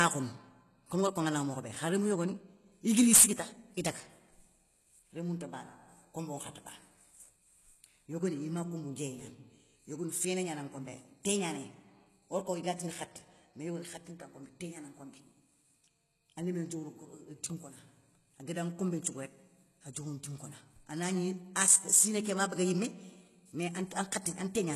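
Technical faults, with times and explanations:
Throughout, HE-AAC compression: the speech has a bright but synthetic top end, with s sounds coming out gritty and lispy and a metallic sheen on sibilants. Nothing reaches above about 12.3 kHz. The likely cause is a low-bitrate HE-AAC encode, consistent with around 16 kbps, where only the lower band is coded and the treble is regenerated by copying lower bands upward. On a spectrogram the upper region shows repeated, smeared copies of lower harmonic patterns that do not line up with the real ones, ending in a hard ceiling at 12.3 kHz.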